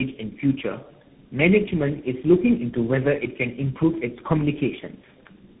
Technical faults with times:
0.00-5.60 tandem speech coding

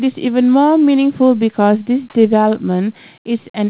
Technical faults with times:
none

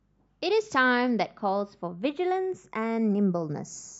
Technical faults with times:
0.00-4.00 channels drifting apart

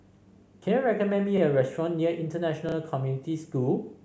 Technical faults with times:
1.38-1.41 repeated buffer
2.69-2.75 repeated buffer

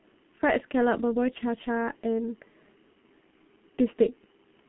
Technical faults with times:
0.00-4.68 G.723.1 codec

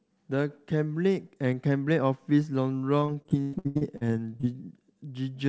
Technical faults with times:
3.00-4.45 repeated packet loss (robotic sound)

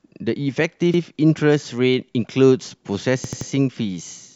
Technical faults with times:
0.94-1.02 repeated buffer
3.24-3.50 repeated buffer

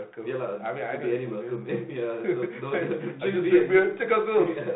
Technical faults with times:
none

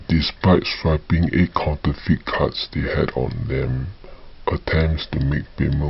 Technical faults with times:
0.00-5.89 wrong sample rate

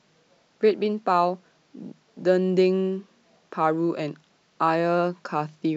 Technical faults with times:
0.00-5.77 sample clock jitter

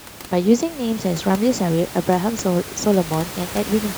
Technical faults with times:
none

